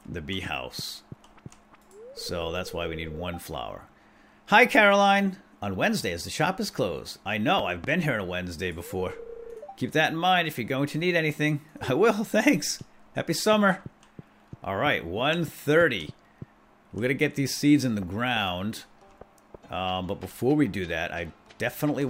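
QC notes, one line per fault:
7.59–7.86 s, loud pop: A sudden voltage pulse, likely from a plug, switch or static discharge, is added to the signal, giving two sharp pops about 10 dB above the surrounding level within roughly a quarter second while the sound continues underneath.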